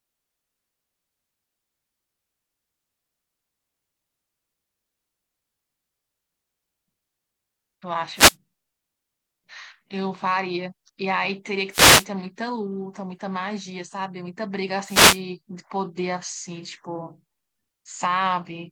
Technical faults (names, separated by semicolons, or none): wireless microphone noise hit